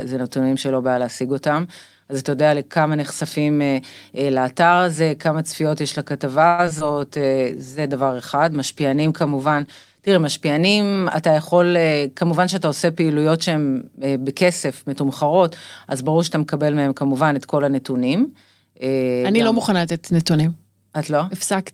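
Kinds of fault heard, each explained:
Call audio freeze: From 6.47 to 6.60 s the sound stops moving forward and the last moment is stretched into a fading tail for about 110 ms before it picks up exactly where it left off. Nothing is lost; a gap has simply been inserted. This is most likely packets stalling in transit so the jitter buffer ran dry, with the receiver extending the final sound until delivery resumed, adding 110 ms of delay.
Short concealed packet loss: Two brief smears follow the freeze, at 6.66–6.69 s and 6.79–6.82 s. In the first, about 20 ms of audio never reached the decoder in time, and about 40 ms in the second. The receiver bridged each hole by extrapolating the preceding sound and crossfading back, but only 5 ms and 14 ms were actually synthesised. The rest was cut, and after the second the playout delay shrank by roughly 30 ms, and short sounds there can drop out.
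Jitter buffer slow-down: Between 6.87 and 7.30 s the audio plays at about 90% speed with its pitch unchanged, drawn out by 49 ms in total. The buffer was running low or had just raised its target delay, so the receiver built up a reserve by repeating single pitch periods and slivers of pause over and over. This gives the sound a slightly dragged quality over that stretch.
Call bitrate drop: From 7.15 to 10.17 s the sound turns coarser and duller as the encoder's bitrate falls from 40 kbps to 17 kbps, holding at the lowest level for about 2.9 s. The call's bandwidth estimate fell, so Opus had far fewer bits to work with. It quantised more crudely and trimmed the upper frequencies, producing a rough, muffled character until the rate climbed back.
Jitter buffer speed-up: From 11.01 to 12.33 s the audio runs at about 109% speed with its pitch held, sounding slightly hurried. The buffer had accumulated more audio than its target, as when delayed packets arrive in a bunch. 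To bring latency back down, the receiver cut out short pieces one or a few pitch periods long, repeatedly, trimming roughly a tenth of a second in total.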